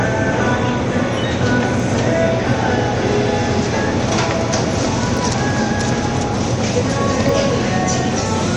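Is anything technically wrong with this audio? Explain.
Yes, two kinds of fault are audible.

MP3 compression runs through the whole clip and is plainly audible, likely from encoding at a low bitrate, which fits about 48 kbps. Short of bits, the encoder removes everything above 11.2 kHz and drops weak frequency lines that flicker between frames. That flicker produces a watery swirl and smeared attacks, which separates it from a simple low-pass filter.

A block of digital silence occurs at 1.80 s, 5.17 s and 7.29 s. Each gap lasts about 1.3 ms, consistent with a 64-sample output buffer that wasn't filled in time and was replaced with zeros. The abrupt cut to silence and back means each is heard as a tick or dip. It is too brief to hear as a hole, but it is a true dropout rather than a lone spike.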